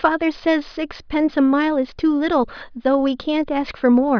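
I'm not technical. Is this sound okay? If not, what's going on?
Yes, it sounds fine.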